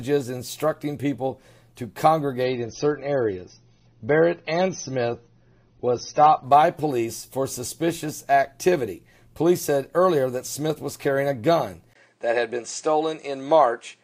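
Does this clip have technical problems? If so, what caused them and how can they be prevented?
Yes. Adaptive stream at a lower bitrate, 2.44 to 6.44 s: a slowed connection forced a leaner rendition, likely AAC dropping from about 96 to 24 kbit/s, so nothing remains above 6.3 kHz and codec artefacts rise abruptly without a gap. Prevent it with a steadier connection or a larger playback buffer.

Input switched to a poorer device, 11.93 s: after a 20 ms silence the band stops at 9.3 kHz through the end, with little level change and new background noise well below the signal, likely from a switch to another input. Prevent it by fixing the input device before recording.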